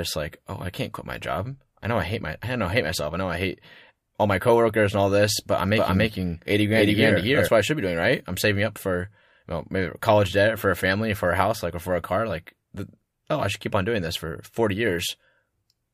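From 5.77 to 7.49 s, right after "all this but I'm" and ending before "what I should be", there is a doubled audio track, likely from the signal being picked up a second time through a slower path. A second full-band copy of the speech runs about 300 ms behind, at roughly the same level as the original, so every syllable is answered by a dry, uncoloured repeat. The copy switches in and out abruptly.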